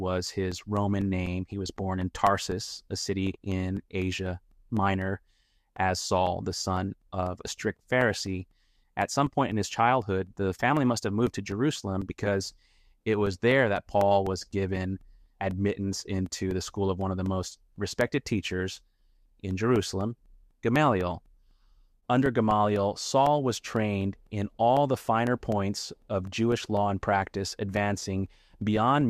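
Periodic USB or driver dropouts run from 0.26 s to 29.01 s: something keeps stalling the USB bus or the audio driver every 0.25 s, and each stall drops a couple of milliseconds of audio that is filled with silence. Around a hundred of these brief gaps land at four per second, so the sound carries a steady, metronome-like ticking, each tiny hole in the waveform clicking wherever signal is present.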